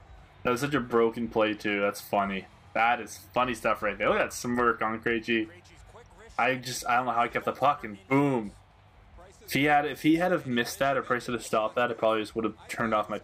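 No technical faults can be heard anywhere in this recording.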